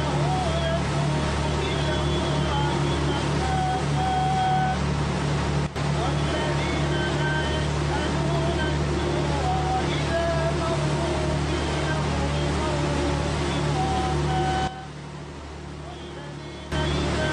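A sudden gain jump occurs at 5.67 s, where the whole signal, background noise included, drops by about 12 dB in a single step and returns at 5.76 s. The same drop recurs from 14.68 s to 16.72 s. Each change lands abruptly rather than fading. It is likely caused by a gain setting or bit shift applied from one sample to the next without any ramp.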